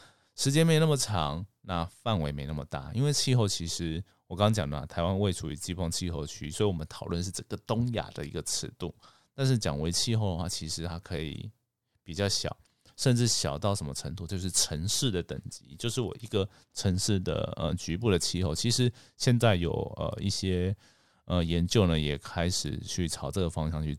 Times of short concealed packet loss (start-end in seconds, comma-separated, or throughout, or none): none